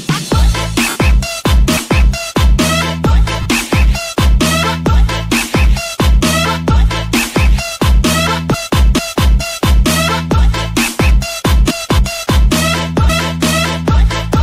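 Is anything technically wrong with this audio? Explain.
Yes. There are lost LE Audio frames at 0.89 to 0.96 s and 3.42 to 3.46 s, gaps of 67.5 ms and 37.5 ms that fit about nine and five lost frames. The LC3 decoder fills each gap by repeating the last spectrum with randomised signs, so the sound smears into a brief noisy wash instead of dropping out cleanly.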